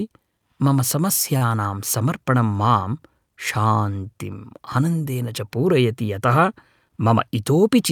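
Speech, and it's got two jitter-buffer hiccups. The first is a short stall from a late packet, between 1.37 and 1.43 s. A packet didn't show up on time, the buffer ran dry, and the receiver stretched the last bit of sound for about 38 ms until the data arrived. It then carried on from the same spot, so nothing is actually lost. You just hear a sound held a touch too long, with a faint buzzy or dipped quality, and everything after it sits 38 ms later. The second is a jitter buffer speed-up from 6.88 to 7.14 s. By then the buffer was holding more audio than it wants, so the receiver clawed the delay back by snipping out tiny pitch-period-sized pieces over and over. Altogether it trims something like 40 ms. Playback runs at about 112% with the pitch unchanged, so that stretch comes across as rushed rather than higher.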